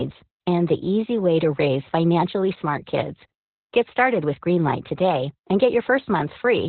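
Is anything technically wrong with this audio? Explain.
Yes, the speech carries heavy Opus voice compression from start to finish. Nothing comes through above about 4.3 kHz, so the codec has narrowed to its narrowband setting and is running the SILK linear-prediction coder, with the excitation coded very coarsely. That fits a bitrate down around 8 kbps. The result is muffled, phone-like speech with a hoarse, slightly robotic edge.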